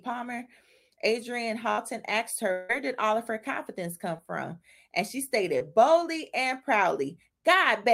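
At 1.71 to 1.80 s a burst of packet loss drops about 60 ms: the last sound is held as a fading buzz or hiss, then the audio jumps ahead.

From 2.52 to 2.71 s, just before "did all of her", about 0.18 s is lost, likely from a long network dropout. The held sound fades throughout but never reaches silence, and it lasts roughly three times longer than the earlier burst.

Two cases of short concealed packet loss follow: 4.17 to 4.20 s, after "of her confidence come", and 5.58 to 5.62 s, before "boldly and". Each removes about 20 ms, heard as a quick smear or wobble.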